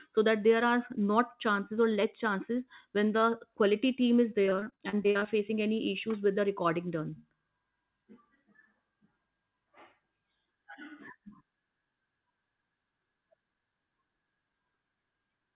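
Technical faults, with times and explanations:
4.46–5.29 s repeated packet loss (robotic sound): choppy stutter after "quality team is"; over a dozen gaps up to 40 ms, each filled by repeating the previous sound.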